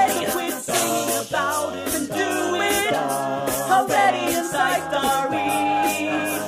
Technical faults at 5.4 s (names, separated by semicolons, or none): loudspeaker feedback squeal